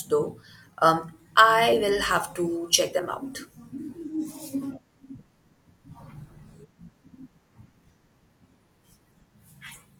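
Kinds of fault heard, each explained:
Damaged data in a compressed stream: corrupted bytes make the decoder misread frames and lose sync until it finds the next valid frame header. In this speech it is heard as three short faults, each about 50 ms long, at 1.69–1.74 s (just before "will have to check"), 4.59–4.63 s and 9.71–9.76 s.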